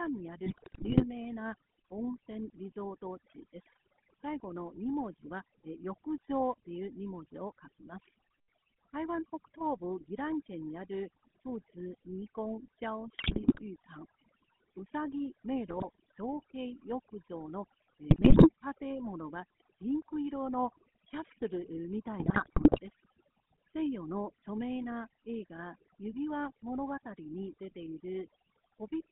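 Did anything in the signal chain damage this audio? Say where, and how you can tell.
Yes. At the call-processing stage, overdone noise removal runs through the whole speech clip. The suppressor pulls individual frequency bands down or out whenever they sit close to its noise estimate, and the softer parts of the speech get taken with them. The background collapses to near silence scattered with twinkling specks. On a spectrogram the gaps between phrases show as dark, empty regions with isolated bright dots, and the speech has ragged holes where its weaker bands were cut.

The codec stage is GSM full-rate, also present from start to finish, and its damage is plainly audible. It models the vocal tract and excites it with regularly spaced pulses, keeping only a fraction of the excitation. The result is a buzzy, gravelly roughness, and the character fits a 13 kbps full-rate coder. A spectrogram shows a telephone band of roughly 200 Hz to 3.4 kHz, with nothing at all above 4 kHz, and a coarse, grainy harmonic structure.

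At the network stage, GSM bit errors break up the sound from 0.46 to 1.04 s, 13.16 to 13.62 s, 15.70 to 15.85 s, 18.10 to 18.50 s and 22.20 to 22.79 s. Corrupted filter, pitch and gain values reach the decoder, so individual frames come out with a warped spectrum or a sudden jump in level. These bursts are heard as squawks, pops and gargling. On the waveform they appear as short spikes in amplitude, and on a spectrogram as smeared, misplaced blocks of energy at each of those times.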